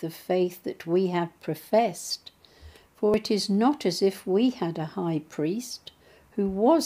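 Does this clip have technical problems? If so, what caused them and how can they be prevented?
Yes, there are two small jumps in the sound, at 2.1 s and 3.14 s, each skipping about 20 ms with no gap. That's likely a dropped buffer (overrun), where the hardware overwrote samples before the program read them. Larger buffers or higher-priority audio threads prevent it.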